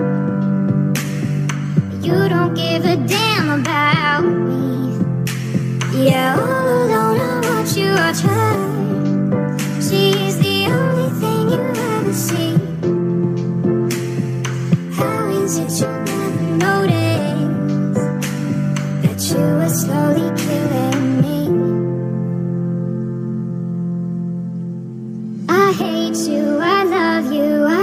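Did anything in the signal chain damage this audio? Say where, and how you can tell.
No, nothing in the signal chain stood out as a problem on listening.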